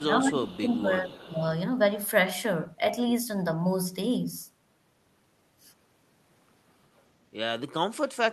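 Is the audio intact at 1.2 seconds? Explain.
No. From 0.01 to 1.42 s the speech dips and thins, falling by around 15 dB at its deepest and over about a second in total. This is speech suppressed in double talk, likely an echo canceller muting the talker while the far side also spoke.

From 1.08 to 1.27 s a faint, delayed copy of the voice sits about 25 dB below the speech, 374 ms behind it. This is echo leak, likely a loudspeaker's sound reaching a microphone and getting past an incomplete echo canceller.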